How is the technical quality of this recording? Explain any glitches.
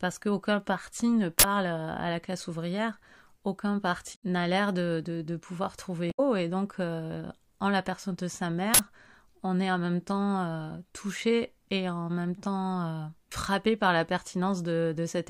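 The recording is marred by four short glitches of two kinds.

Uninitialised buffer, at 1.39–1.44 s after "qu'aucun parti ne" and at 8.74–8.79 s after "la personne de sa": a block was played before audio filled it, so stale memory came out as a loud 46 ms noise burst. This fits a 2048-sample buffer. It shows as a dense rectangular slab on the waveform and a bright broadband column on the spectrogram.

Damaged data in a compressed stream, at 4.12–4.23 s and at 6.08–6.20 s (between "de de de pouvoir" and "et donc en la"): corrupted frames threw the decoder out of sync until it found the next header, giving a brief glitch. The spectrogram shows a smeared, garbled patch about 0.12 s wide, with the waveform discontinuous at its edges.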